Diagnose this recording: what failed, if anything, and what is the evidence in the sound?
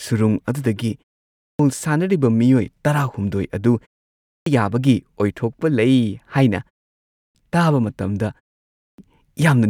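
The failure is at the playback stage: a clipped start after a pause. Four times the speech resumes abruptly out of silence with its onset missing, at 1.31, 4.13, 7.02 and 8.68 s, each after a pause of roughly 0.35 to 0.4 s. The lost portions run 0.28, 0.33, 0.33 and 0.30 s. The output device drops into a low-power or unlocked state during the short silences and needs about a third of a second to wake and resynchronise, so the first sounds are swallowed.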